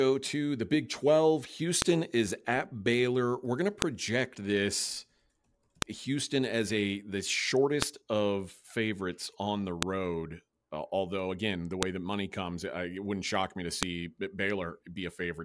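It's a speech clip with a file header played as audio problem: sharp loud snaps land at 1.82, 3.82, 5.82, 7.82, 9.83, 11.83 and 13.83 s, so right before "is at", just after "going to", and after "wouldn't shock me to". That steady two-second spacing means the audio was joined from 2-second WAV pieces and nobody stripped each piece's header, so those header bytes get played as samples and click regardless of what the talker is doing.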